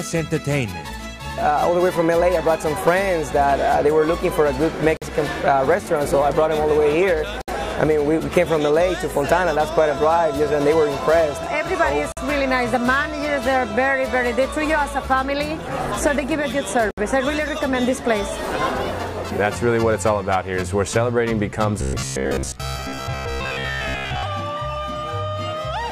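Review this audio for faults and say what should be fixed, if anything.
There are four short dropouts, each a gap at a join of encoded pieces: 4.97 to 5.02 s (48 ms), 7.42 to 7.48 s (64 ms), 12.12 to 12.17 s (48 ms) and 16.91 to 16.98 s (68 ms). Each is a sudden hole with smeared edges, after which the sound resumes where it left off. That's encoder start-up delay and last-frame padding left in at each splice. To fix it, trim the encoder delay and padding from each piece before joining, or encode the whole thing in one pass.

From 21.82 to 24.23 s the sound turns into a rigid, metallic buzz pitched at about 67 Hz. It still roughly follows the underlying contour. This is robotic sound from repeated short buffers, likely caused by audio arriving too seldom, so the playback side keeps looping the last chunk. A 67 Hz buzz points to a chunk of about 15 ms being repeated, with most of that stretch filled by repeats instead of real audio. 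To prevent it, give the stream a bigger jitter buffer or fix whatever is starving the audio feed.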